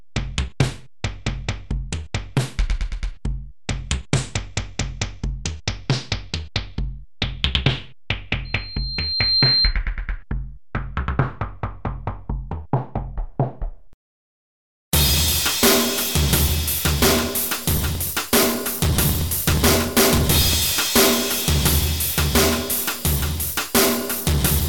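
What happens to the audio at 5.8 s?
Nothing goes wrong at 5.8 s; the audio plays through that moment intact, with no dropout, click or other fault.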